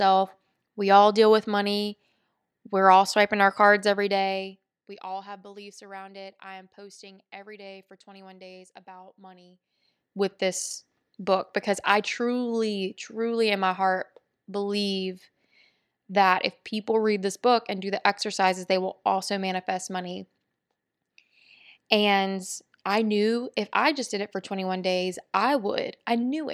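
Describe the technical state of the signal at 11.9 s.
At 11.9 s the speech signal is intact, with no technical fault present at that moment.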